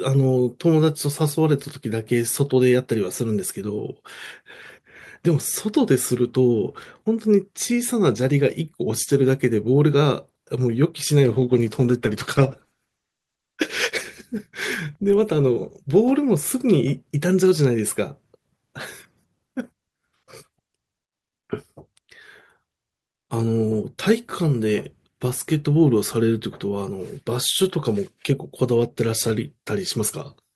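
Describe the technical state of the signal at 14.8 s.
At 14.8 s the speech is inside a call bitrate drop running from 11.24 to 17.33 s. The encoder was starved of bits, so the speech is coded coarsely and sounds rough and muffled. The dip fits a fall from about 64 to 15 kbps, bottoming out for about 2.8 s.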